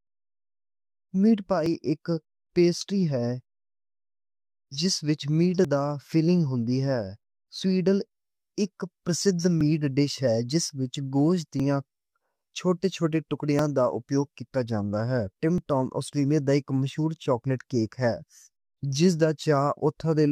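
At 1.66, 5.65 (after "وِچ میٹ", before "دی فِلنگ ہوتی"), 9.61 (after "اِک پرسدھ"), 11.60, 13.59 and 15.58 s (before "ٹام آسٹریلیا دا اِک"), the speech clicks or skips slightly. This is an overlap between stream segments: overlapping timestamps trim a few milliseconds at boundaries spaced roughly 2 s apart.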